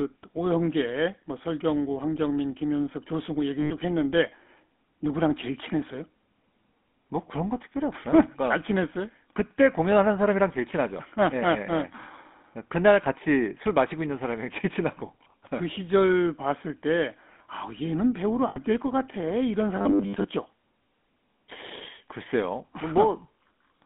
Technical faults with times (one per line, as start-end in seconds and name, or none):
0.00-23.85 GSM full-rate codec
3.60-3.71 lost GSM frames
18.48-18.57 lost GSM frames
19.76-20.24 robotic sound from repeated short buffers